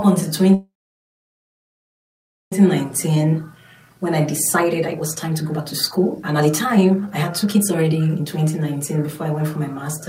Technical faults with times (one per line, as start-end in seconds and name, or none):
0.54-2.53 call audio freeze
2.84-9.89 jitter buffer speed-up